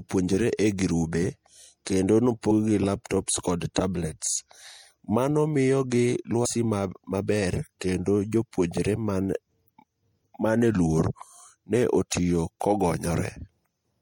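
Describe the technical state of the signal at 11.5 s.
At 11.5 s the speech still carries MP3 compression, likely from an encoder starved of bits, consistent with about 64 kbps: weak components flicker, giving a watery, swirly sound with chirpy s sounds.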